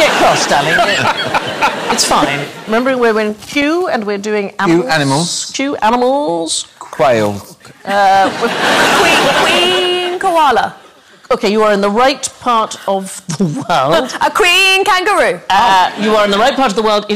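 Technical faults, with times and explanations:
Throughout, hard clipping: the signal is driven about 12 dB past what a stage can pass, so roughly one sample in twenty is cut flat at the ceiling. Those squared-off peaks add high harmonics, heard as a harsh fuzz on every loud moment.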